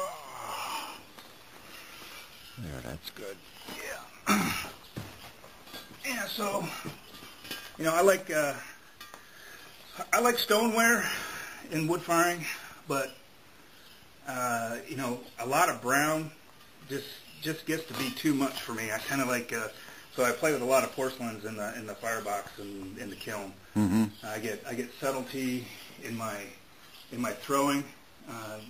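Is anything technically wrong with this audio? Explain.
Yes, two things. There are overlapping chunks at 5.36, 11.37, 17.38 and 23.39 s. Each 6 s chunk starts early, so about 13 ms replays at every join and you get a regular stutter. There are also corrupt frames decoded at 6.79–6.89, 15.21–15.28, 18.49–18.55 and 25.43–25.47 s. Damaged compressed frames played anyway, spraying energy into the wrong frequencies. That gives brief chirpy noise bursts peaking between about -35 and -25 dBFS.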